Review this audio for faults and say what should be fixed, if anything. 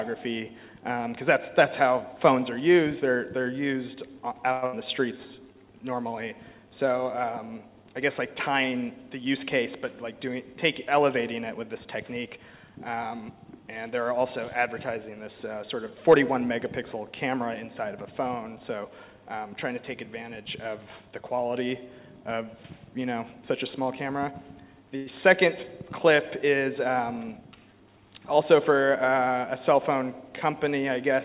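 From 4.52 to 4.75 s the sound is replaced by a decaying, buzzy continuation of what came before, lasting about 0.21 s. It resumes with roughly 0.12 s missing. This is likely a long network dropout, and afterwards the receive delay sits around 50 ms higher.

Right after that, from 5.17 to 5.59 s, a jitter buffer slow-down plays the audio at 87% speed without changing pitch. The receiver repeats pitch periods to rebuild its reserve, adding 59 ms, so sounds are drawn out.

Jitter buffer speed-up occurs three times, each time with the pitch unchanged while the receiver drops short pitch-period segments to shed excess delay:
10.16–11.01 s at 104%, removing around 40 ms.
11.73–12.38 s at 107%, removing around 50 ms.
27.0–27.88 s at 111%, removing around 100 ms, which sounds distinctly hurried.

A short stall from a late packet runs from 24.96 to 25.08 s. The buffer emptied, and the last sound is held for 96 ms. 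Nothing is lost, but the delay rises by 96 ms. The band stops at 4 kHz throughout, as expected for the G.711 mu-law path.

To prevent these, improve network stability and tune the jitter buffer's target delay and adaptation rate, so that burst loss and delay swings are absorbed without large stretch and compress corrections.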